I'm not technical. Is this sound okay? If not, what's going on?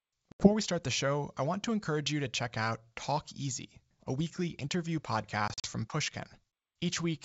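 No. Packet loss on an ADPCM call cuts out the speech twice. At 0.32 to 0.49 s about 80 ms goes silent just before "we start the show". At 5.48 to 5.67 s, right after "a weekly interview", about 100 ms is lost in short gaps. Each gap is a chunk of the call that never arrived. When the sound comes back, the receiving end has briefly lost track of the sender, so it returns slightly distorted before settling. The call uses G.722 wideband telephone coding, which otherwise sounds clear.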